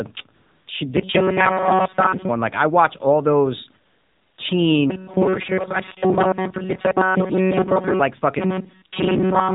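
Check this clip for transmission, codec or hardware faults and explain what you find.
Three faults are audible in this speech clip: plainly audible mobile-codec coding throughout, two comfort-noise gaps, and three stretches of robotic buzz.

AMR narrowband mobile codec: Throughout, nothing passes above 4 kHz. The low 7.4 kbps rate leaves the voice buzzy and synthetic, a texture that plain band-limiting would not add.

AMR comfort noise: From 0.36 to 0.68 s and from 3.86 to 4.38 s, speech frames stop for 320 ms and then 520 ms. The gaps are filled with smooth, steady synthetic noise rather than dead silence, which sets this apart from a simple dropout.

Robotic sound from repeated short buffers: From 0.97 to 2.29 s, 4.90 to 8.00 s and 8.39 to 9.55 s, a rigid metallic buzz at 188 Hz sits on the speech. This is likely caused by a buffer of about 5.3 ms being replayed for most of the time. 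Unlike codec buzz, its pitch stays fixed and does not follow the voice.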